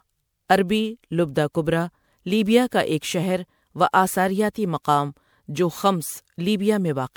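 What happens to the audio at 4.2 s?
Generation loss at 4.2 s, as everywhere in the clip: the speech sounds swirly, hollow and smeared, likely from roughly five successive MP3 re-encodes at 128 kbit/s.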